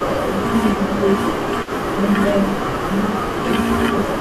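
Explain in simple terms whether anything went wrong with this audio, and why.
Yes, two things went wrong, both typical of a call where the far side used a loudspeaker.

The first is an echo leak. A faint, delayed copy of the speech trails the original by about 157 milliseconds, heard from 0.0 to 0.41 s, from 0.76 to 2.04 s, and from 3.92 s to the end. The likely cause is that the other side's microphone picked up its own loudspeaker and its echo canceller let some of that sound get through, so it came back to us. What marks it out is something extra: a second voice lagging just behind.

The second is speech suppressed in double talk. The main voice briefly drops in loudness, getting quieter and duller in short pieces, between 0.11 and 1.22 s, from 1.87 to 2.01 s, and from 2.49 to 4.12 s. The dips are deepest in that last stretch. Likely, both sides were talking at once and the echo canceller, unable to separate the talker from the echo, turned everything down. 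Unlike the echo, this takes sound away rather than adding a copy.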